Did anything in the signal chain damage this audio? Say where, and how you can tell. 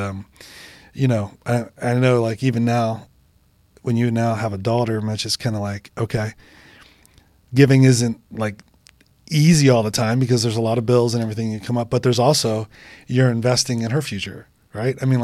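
No, nothing in this speech recording stood out as damaged on listening.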